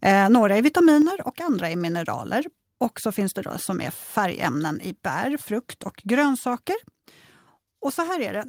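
A speech clip in which the whole signal, voice and background together, drops abruptly in level at 1.02 s, just before "och andra är mineraler", and stays about 5 dB quieter from then on. This is a microphone volume stepped down: the step is instantaneous and even across everything, not a fade, which likely means the call software judged the input too hot or near clipping and cut the device's input volume in a single move.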